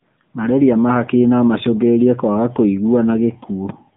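Throughout, the AMR narrowband mobile codec removes everything above 3.7 kHz. Its frame-based vocal-tract modelling leaves the speech plainly buzzy and synthetic, consistent with a 7.95 kbps mode.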